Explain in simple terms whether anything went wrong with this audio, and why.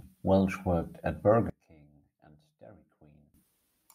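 From 1.50 to 3.34 s the speech drops away sharply, leaving only a faint trace until it returns. The likely cause is one channel inverted: one stereo side is flipped upside down, so when both are combined, the shared voice cancels itself out.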